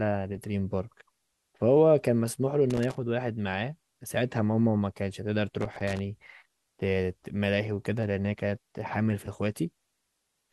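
Loose connector crackle breaks into the speech twice, from 2.7 to 2.98 s and again from 5.6 to 5.99 s, each burst lasting roughly a quarter to four tenths of a second. A worn or dirty contact somewhere in the signal path is flickering between connected and open as it shifts, so the audio is rapidly switched on and off. Any DC present on the line turns those breaks into pops, and together they make an uneven, scratchy crackle.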